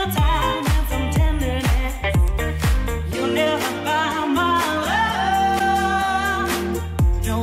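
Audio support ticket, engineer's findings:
Single sharp tick at 2.28 s, one sample. Bit error spike: one flipped bit in memory or on the digital link, value jumps by a power of two and snaps back.

Brief garbled glitch with skip forward, 5.58 to 5.61 s. Likely broken MP3 bit reservoir: frames cut, next frame borrows bytes from the wrong frame; duration fits one 24 ms frame.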